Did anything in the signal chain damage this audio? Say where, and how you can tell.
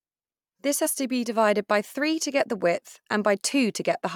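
Yes, at the codec stage. At 0.85 s the speech jumps forward. That is the mark of compressed frames skipped. About one frame of audio never reached the output, either missing from the file or rejected by the decoder as damaged. The gap is around 20 ms, which fits a frame length of 21.3 ms.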